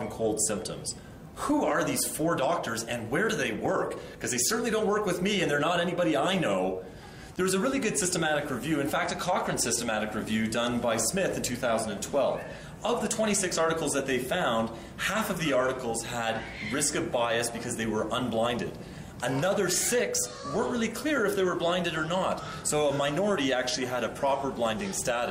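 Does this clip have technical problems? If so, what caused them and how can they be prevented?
No, this clip has no technical problems, so there is nothing to trace or prevent.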